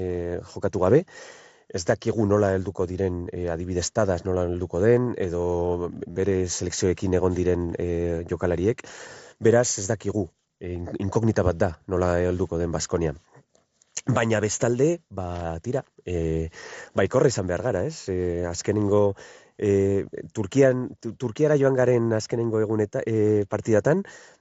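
At 6.11 to 6.16 s there's a concealed Bluetooth headset packet loss: about 50 ms of headset packets went missing, consistent with a short run of lost frames. The receiver filled the gap by repeating recent waveform, so it comes through as a brief buzzy tone with a slight warble on return.

Then at 15.35 to 15.44 s, just before "tira e", a loose connector crackle: a flaky contact breaking and remaking, giving a short scratchy burst over the mSBC-coded audio.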